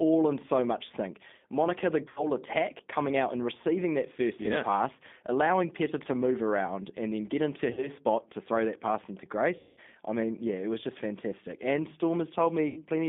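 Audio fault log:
Throughout: G.729 codec. The speech is band-limited to roughly 200 Hz to 3.6 kHz, with nothing above 4 kHz, and it has a plainly audible rough, synthetic edge. That fits an 8 kbit/s G.729A link. Each 10 ms frame is rebuilt from a vocal tract filter, a pitch predictor and a handful of pulses, so the fine detail of the waveform is lost.
2.08 to 2.29 s, 7.73 to 7.89 s, 9.57 to 9.80 s, 12.68 to 12.84 s: VoIP packet loss concealed by the speech codec. At each point the decoder fills a gap by extending its last pitch and filter, so the sound is stretched into a buzzy tone or coloured noise that fades. The gaps are about 80, 40, 200 and 80 ms of missing audio. The longest, after "throw that pass into", fades furthest before "I mean yeah it" resumes. Recovery is slow because each frame is built on the one before it.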